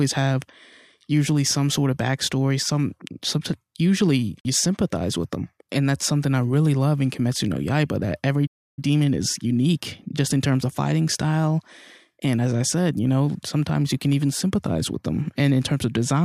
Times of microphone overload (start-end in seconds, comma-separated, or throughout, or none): none